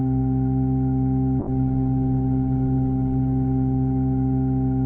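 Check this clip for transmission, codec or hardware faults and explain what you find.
One fault is audible, a call bitrate drop. From 1.41 s to the end, the music loses its top: everything above about 8 kHz disappears where it previously reached 20 kHz, and the texture turns rough and watery, worst for about 1.86 s at the bottom of the dip. The call's bandwidth estimate fell, so the encoder had far fewer bits to spend, consistent with a fall from around 48 kbps to roughly 10 kbps. It quantised more coarsely and narrowed the coded band.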